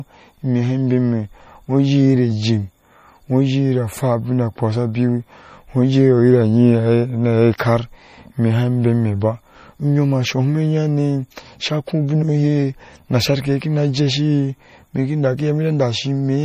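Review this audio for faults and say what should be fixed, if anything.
MP3 compression is the likely cause of the damage heard throughout this speech. The treble stops dead at 15.2 kHz, and the upper band has a watery, swirling quality as weak detail drops in and out from frame to frame. The damage is plainly audible, which fits a low bitrate near 40 kbps. A spectrogram shows a hard horizontal ceiling at 15.2 kHz, with patchy, blocky holes flickering below it in the high frequencies. To prevent it, encode at a much higher bitrate or keep a lossless copy for delivery.

Pre-echo appears at 7.58 s. A sharp onset falls late in a transform block, so the quantisation noise sized for that loud moment spreads back into the quiet just before it. This leaves a short hiss about 16 ms ahead of the attack, and the attack itself sounds softened. On a waveform, a thin smear of noise precedes the transient. 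A spectrogram shows a broadband wash leading into the onset's vertical edge. To prevent it, use a higher bitrate or an encoder with reliable block switching for transients.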